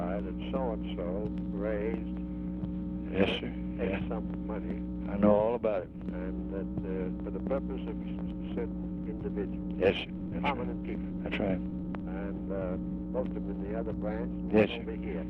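At 8.01–8.03 s the audio jumps straight ahead in a skip ahead: about a second and a half of material is simply gone, and the two sides are butted together with no silence or fill between them. On a waveform this shows as an abrupt change in envelope with no gap. On a spectrogram it appears as a hard vertical seam where one pattern of energy stops and another begins. This is a stretch dropped on the way or by the jitter buffer when it overflowed, while later audio was already queued behind it. Right after the jump, the jitter buffer speed-up begins. From 8.15 to 10.32 s the sound plays at 117% of its normal rate, shedding nearly half a second. From 10.76 to 13.53 s it plays at 120%, dropping about half a second more. Pitch does not change, because the receiver removes whole pitch periods rather than resampling, so the sound simply feels hurried. A spectrogram keeps the same harmonic spacing while every event is squeezed shorter in time. 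A zoomed waveform reveals periodic cycles missing at the splice points, the buffer draining its excess delay.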